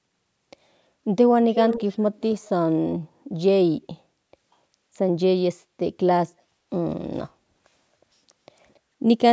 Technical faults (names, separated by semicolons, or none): echo leak